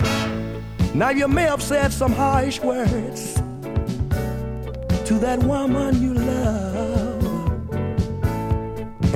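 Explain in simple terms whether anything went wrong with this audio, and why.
For the first 1.5 seconds the sound has a gritty, grainy edge that shifts along with it, roughest in the quiet parts. That's likely low bit depth without dither: the audio got rounded to a coarse set of levels, which fits about 9 bits.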